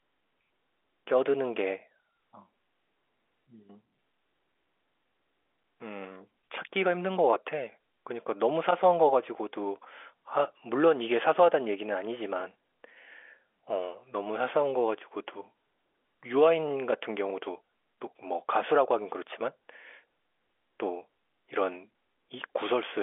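Nothing goes wrong anywhere in this speech, which comes down an ordinary G.711 A-law phone line at 64 kbps, so what you hear is just the usual narrow telephone band with nothing above 3.7 kHz.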